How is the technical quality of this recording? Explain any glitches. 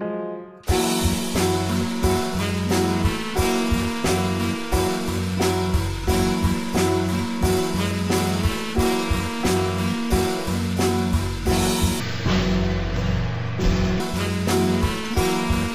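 The recording has one clear glitch, between 12.0 and 14.0 s, where the stereo stream is read as mono. The interleaved left and right samples are taken in sequence as a single channel, so each stereo frame becomes two consecutive mono samples. The sound in this section plays at 0.5x speed and drops a full octave, 12 semitones, giving a slowed, deep, dragging character until normal playback resumes at 14.0 s.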